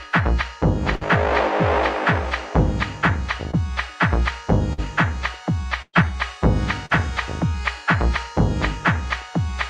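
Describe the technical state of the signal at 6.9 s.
At 6.86 to 6.92 s there is short concealed packet loss. About 40 ms never arrived. The decoder extended the preceding sound, leaving a brief smear or wobble.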